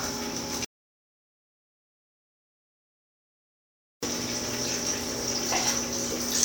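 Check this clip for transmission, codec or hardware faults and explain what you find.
One fault stands out: an audio dropout to silence from 0.65 s to 4.03 s, removing about 3.38 s of sound. The signal stops mid-flow into silence, with no room tone or noise floor, then resumes abruptly. The likely cause is a lost input, such as a disconnected device, failed link or stray mute, while recording continued. That total silence distinguishes it from a level drop or a noise gate, which leave some residual hiss.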